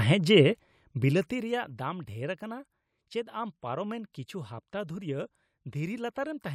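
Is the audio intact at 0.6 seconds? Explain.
No, zipper noise runs from 0.51 to 1.90 s: the level falls about 15 dB in unsmoothed steps, roughly fifty per second, giving a ticking buzz rather than a clean fade.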